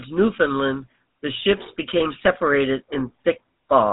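From start to finish the speech carries GSM full-rate codec damage, plainly audible: a buzzy, gravelly roughness from pulse-driven vocal-tract modelling, consistent with roughly 13 kbps. Nothing passes above 3.8 kHz, but the grit, not just the dullness, separates it from simple band-limiting.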